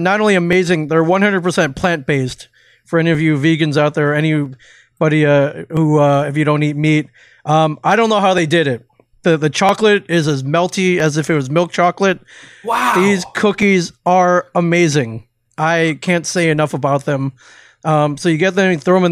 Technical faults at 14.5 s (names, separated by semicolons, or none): clock drift buffer slips